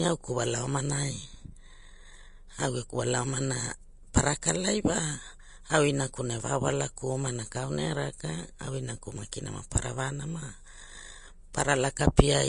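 Throughout the speech, nothing is present above 10.5 kHz. The treble that remains is hissy and grainy, with sibilants turned to rough noise and tones roughened. This is plainly audible damage, likely from Vorbis compression at a low setting consistent with roughly 35 kbps. The encoder has discarded the top band and quantised the upper detail so coarsely that it returns as noise. Unlike broadband background hiss, this graininess tracks the speech itself and vanishes in pauses.

Pre-echo appears at 4.42 s, 9.32 s and 11.53 s. Each is a brief wash of hiss about 10 ms long, landing just before a sharp onset, which then sounds softened and smeared rather than crisp. The codec spread the quantisation noise meant for the loud attack across its whole transform block, filling the quiet instant ahead of it. Unlike a click, it has no sharp edge, and it comes before the attack rather than after, as a reverb tail would.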